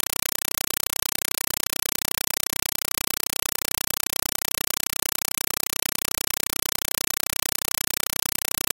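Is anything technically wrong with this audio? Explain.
Yes. For the whole clip, the speech is replaced by very loud, harsh, chattering static that stutters at a steady 31.25 times per second, with short bursts of about 5.33 ms separated by silent gaps. This is a compressed stream played as audio. A Dolby Digital (AC-3) bitstream was passed over the digital link as if it were ordinary samples instead of being decoded. Each frame's data comes out as raw noise, followed by the zero padding that fills the rest of the frame period.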